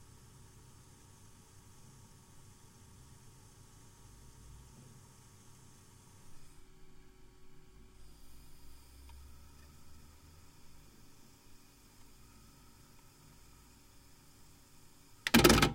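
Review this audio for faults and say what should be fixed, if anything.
Nothing in this recording of sounds needs fixing. No technical faults could be heard anywhere in the audio.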